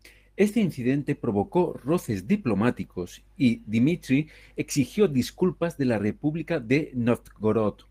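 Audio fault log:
No technical faults were found in the speech signal.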